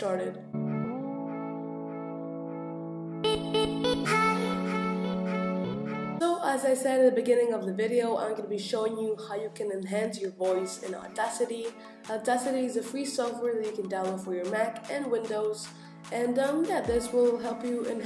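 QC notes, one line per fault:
No fault to note for QC.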